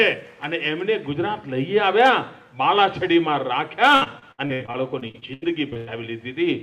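Repeated packet loss runs from about 3.95 to 5.89 s: sixteen separate gaps, the longest about 95 ms, each patched by stretching the preceding sound. Nearly a third of that stretch is filled-in material, so the audio turns choppy and robotic, with pieces audibly missing.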